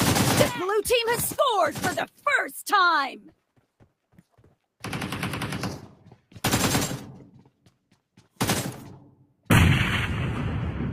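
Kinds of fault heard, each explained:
Sound cut by the noise suppressor: The suppressor mistook parts of the sound for noise and pulled them down. Four brief dips occur, near 2.07, 4.12, 7.33 and 9.12 s. Each lasts a fraction of a second. Level falls by about 8 to 13 dB.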